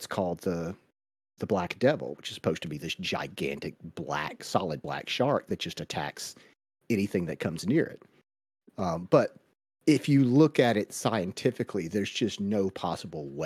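At about 4.83 s, right after "this gigantic black solid" and before "shark that just attacks", a brief glitch cuts in, lasting only about 14 milliseconds. This is damaged data in a compressed stream: a short run of bytes in the encoded file was corrupted, so the decoder misread the affected frame, lost sync, and searched for the next valid frame header before resuming.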